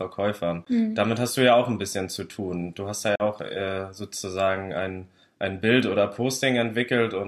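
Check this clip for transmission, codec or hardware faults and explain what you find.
Two brief silent gaps break the speech, at 0.65 s and from 3.15 to 3.22 s, each cut off abruptly or with a fade of a few milliseconds before the sound resumes further along, as if it had kept playing. These are likely Bluetooth dropouts, where late packets were discarded. The first loses about 14 ms, the second 42 ms, which fits roughly three lost packets.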